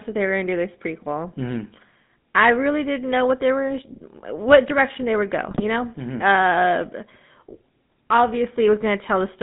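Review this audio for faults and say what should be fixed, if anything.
The speech carries GSM full-rate codec damage from start to finish. The codec rebuilds the voice from a vocal-tract filter driven by a sparse, regularly spaced pulse train, so the excitation is coarse and the voice turns buzzy and gravelly, plainly so here, which fits the 13 kbps full-rate mode. On a spectrogram the energy sits between about 150 Hz and 3.7 kHz with nothing above, and harmonics look smeared and grainy. To prevent it, carry the call over a wideband or higher-quality codec instead of GSM full rate.

From 5.42 to 5.63 s, GSM bit errors break the speech into squawks, pops and gargling. Corrupted filter, pitch and gain parameters reach the decoder, so individual frames come out with a bent spectrum or a sudden jump in level. The damage points to roughly ten hit frames and an error rate around 1.6%. On a waveform the stretch shows abrupt amplitude spikes, and on a spectrogram it shows blocky, frame-length patches of misplaced energy. 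Preventing it means improving the radio link or adding stronger error protection and bad-frame concealment.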